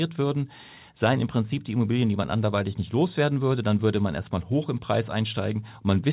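No technical faults can be heard in the speech, which has the narrowband character of a call path, with nothing above 4 kHz, as fits G.711 mu-law coding at 64 kbps.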